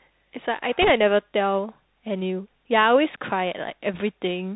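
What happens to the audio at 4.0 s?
Bit errors on a Bluetooth voice link hit the audio from 3.94 to 4.01 s. Flipped bits in the one-bit stream nudge the reconstructed waveform the wrong way. Because each bit carries only a small step and the error fades, the result is a brief rushing crackle rather than a loud click. The density fits an error rate of around one to two percent.

Underneath, the Bluetooth CVSD headset codec is plainly audible. Everything above 4 kHz is missing, sibilants sound scratchy, and a granular hiss sits under the speech. This comes from the adaptive up-or-down step coder, and the narrow band points to a 64 kbps headset link.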